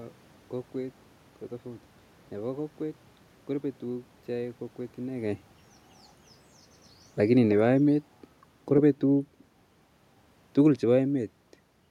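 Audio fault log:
7.18–8.08 s, automatic gain falling: the level eases down by about 3 dB over 0.9 s as the gain control backs off from input it judged too loud or too noisy. Unlike the talker's movement around 5 s, the room noise drops along with the speech.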